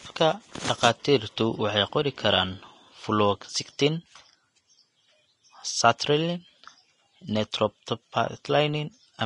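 From start to finish the speech carries a hissy, grainy texture. The treble stops sharply near 10.6 kHz, and the consonant attacks sound smeared. This is likely Vorbis compression at a low setting, consistent with roughly 33 kbps. The codec keeps a smooth spectral outline but quantises the upper detail so coarsely that it turns into noise of similar energy. That substituted noise is what separates it from a plain low-pass filter, which would sound dull rather than gritty.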